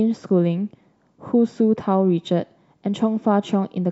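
No technical faults can be heard anywhere in this recording.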